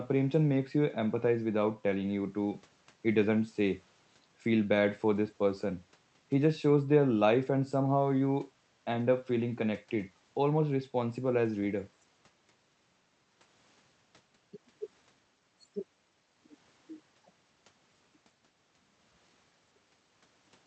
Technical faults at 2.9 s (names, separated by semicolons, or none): none